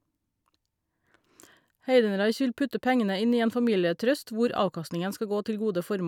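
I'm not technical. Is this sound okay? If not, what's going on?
Yes, this sound is okay, and nothing is going on that needs fixing.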